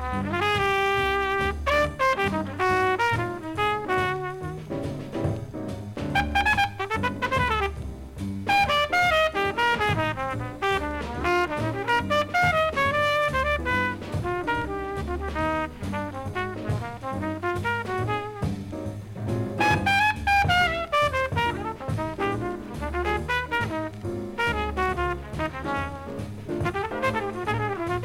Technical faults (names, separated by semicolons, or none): none